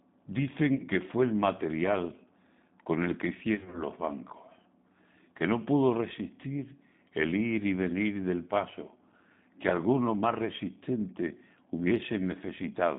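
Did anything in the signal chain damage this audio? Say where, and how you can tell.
Yes. The G.729 codec affects the whole recording at the codec stage. Nothing reaches below about 150 Hz or above 3.7 kHz, and the speech has a plainly rough, synthetic texture, which fits an 8 kbit/s G.729A coder. It doesn't send the waveform. It sends a vocal-tract filter, a pitch lag and a few fixed pulses per frame, and the decoder rebuilds speech from those. The sparse pulse excitation produces the grainy, buzzy edge.

VoIP packet loss concealed by the speech codec occurs at the network stage, at 0.75 to 0.83 s and again at 3.55 to 3.83 s. The first gap loses 40 ms of audio. The second spreads about 120 ms of missing audio across 180 ms, with no single gap longer than 40 ms. In each gap the decoder repeats its last pitch and filter at falling gain, so the sound smears into a fading buzz or coloured noise. 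It stays weak or distorted briefly after packets resume because each frame is predicted from the damaged one before it.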